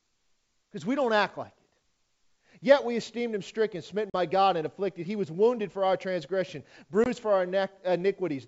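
Around 4.10 s, right after "esteemed him stricken smitten", there's a hard-edged hole of about 40 ms on this wideband G.722 call, a couple of packets going missing and filled with silence. That's ADPCM packet loss. The decoder's predictor and step size drift out of step with the sender's, so the speech comes back slightly distorted before settling. The same thing happens, shorter at 20 ms, at 7.04 s between "wounded for our transgression" and "for our".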